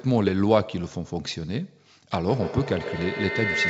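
From 2.28 s to the end of the speech at 3.69 s there is a feedback howl. Sound leaks from a loudspeaker back into a microphone on the same call, and each trip round the loop comes back louder. The repeats narrow into a tone near 2 kHz, with the loop coming round about every 150 ms, and peak about 2 dB above the speech. A spectrogram shows a bright horizontal band near 2 kHz, with nothing above 8 kHz from the call codec. The waveform envelope swells as the howl builds.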